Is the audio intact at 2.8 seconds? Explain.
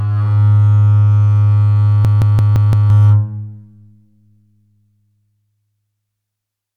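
No. A system hang loop runs from 2.05 to 2.90 s: a frozen system replays one 170 ms buffer five times, a machine-gun stutter at 5.86 Hz.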